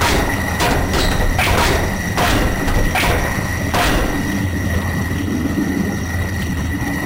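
Right from the start and all the way through, there's imaging from sample-and-hold upsampling. The sound was taken from 24 kHz up to 48 kHz by just repeating each sample, with no smoothing filter afterwards. That leaves a mirrored copy of the original spectrum folded up into the 12 to 24 kHz band, sitting about 21 dB below the signal. You hear it as a metallic fizz riding on top of everything, rising and falling with the sound itself.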